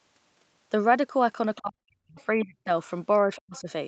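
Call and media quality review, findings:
Other side's voice leaking through: faint far-end voice bleeding into the uplink at 1.56 to 1.60 s, 2.19 to 2.24 s and 3.36 to 3.61 s, about 30, 35 and 25 dB below the talker. Likely residual echo: loudspeaker playback reaching the microphone, with the echo canceller's adaptive filter not subtracting all of it. The first two are brief scraps at the edges of the dropouts. The third runs a quarter second and is the most audible.

Speech suppressed in double talk: talker's level collapses by roughly 40 dB at 1.60 to 2.19 s, 2.35 to 2.70 s and 3.27 to 3.68 s, with each dip lasting a few hundred milliseconds. Likely the echo suppressor's nonlinear stage treating overlapping near-end speech as echo and attenuating the whole signal. The first dip is bracketed by leaked far-end energy, and the last one overlaps the 3.36 s leak. The audio is band-limited to 8 kHz by the call path.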